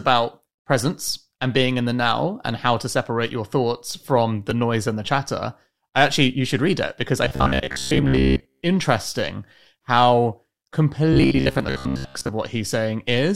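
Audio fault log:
4.51 s, gap between stream segments: a brief hard-edged silence between "separate your thoughts from" and "noise and the chatter", where two stream segments fail to meet.
7.25–8.62 s and 11.13–12.29 s, robotic sound from repeated short buffers: a rigid metallic buzz at 66.7 Hz, likely from a 15 ms buffer repeated while most incoming audio is skipped.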